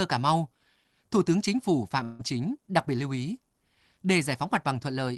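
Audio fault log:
2.03–2.21 s, long network dropout: the speech gives way to a smeared, buzzy continuation of the last sound that fades over about 0.16 s. It never drops to silence before the audio resumes, and about 0.16 s of speech is gone. This is likely a run of packets that never arrived, with the receiver's concealment stretching the final sound across the gap. The filler carries the call codec's coding noise and a top end cut near 12 kHz, as with Opus.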